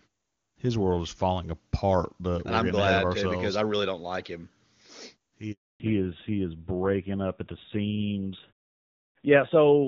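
At 5.52 s the sound drops into a handover gap: the signal dies away within a few tens of milliseconds and stays silent for 280 ms, until 5.80 s, while the call switches networks and no frames arrive. Unlike the muted pauses elsewhere in the clip, which fade only between utterances and lose only very quiet sound, this silence cuts into running speech, and whatever was said during it is gone.

When the sound resumes at 5.80 s, it has fallen back to narrowband and stays there to the end. Before this point the HD Voice wideband codec carried energy well above 4 kHz. Now nothing above 4 kHz remains, so sibilants lose their edge and the voice turns dull and boxy, with a rougher texture that fits a low-rate narrowband mode around 7 kbit/s. Low-rate wideband coding sounds raspy but keeps its upper band, whereas this change cuts the bandwidth abruptly and permanently.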